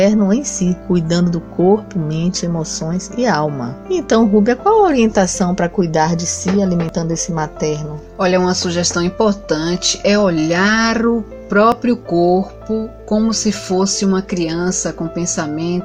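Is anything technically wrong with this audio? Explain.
Yes. There are three abrupt skips at 4.02 s, 6.89 s and 11.72 s, each heard as the sound jumping ahead. Each is likely a dropped buffer (overrun). Roughly 10 ms is lost at the first and third and about 30 ms at the second, with the two sides spliced together. The waveform shows a sharp discontinuity at each point and no gap, and the spectrogram shows a thin vertical broadband line.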